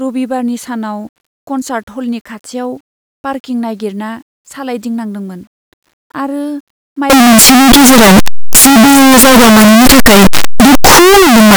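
From 7.10 s to the end of the speech, the sound turns to a loud, harsh distortion in which quiet stretches are as loud as the rest. The likely cause is signed and unsigned mixed up on the 8-bit samples, flipping the top bit so each zero crossing jumps across the full range.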